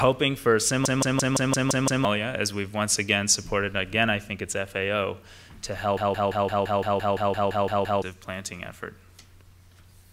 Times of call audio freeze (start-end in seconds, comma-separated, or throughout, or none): none